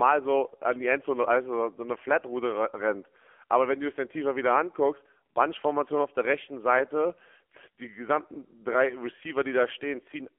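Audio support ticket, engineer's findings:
Thin, boxy speech, buzzy and synthetic, whole clip. Band limited to roughly 300 Hz–3.4 kHz, nothing up top. Codec damage plainly audible. AMR narrowband mobile codec (AMR-NB): low-rate vocal-tract model rebuilds speech from sparse pulses per subframe. Coarse, grainy texture fits a low mode, around 7.4 kbps.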